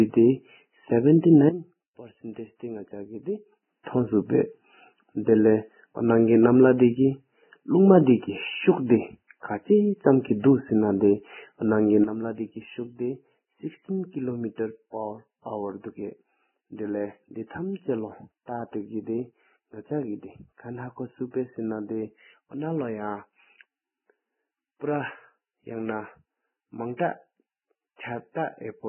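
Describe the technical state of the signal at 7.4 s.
At 7.4 s the speech sits inside damage that runs through the whole clip. Nothing survives above 3 kHz, and the remaining treble sounds hissy and grainy, with blurred consonant attacks. This heavy damage is likely Vorbis compression at a very low bitrate, around 9 kbps.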